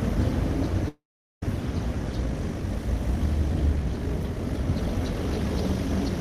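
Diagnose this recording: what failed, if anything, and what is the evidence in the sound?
Long network dropout, 0.88 to 1.43 s, network stage. About 0.54 s of audio never arrives. The receiver's concealment keeps the last sound going as a buzz that fades, leaving roughly 0.42 s of silence before the sound resumes partway along, with the missing stretch simply gone. This is likely a burst of lost packets too long for the jitter buffer or concealment to bridge, so the gap plays out as a fade into silence.

Time-stretched section, 2.07 s to the end, processing or playback stage. From here the pace abruptly doubles while the pitch stays put, and the sound turns rushed. This is likely a pitch-preserving time-compression algorithm running at 2.0 times speed, squeezing the audio by discarding short segments and splicing the remainder together. The dropped pieces and repeated splice points produce the hurried texture instead of a chipmunk-like pitch rise.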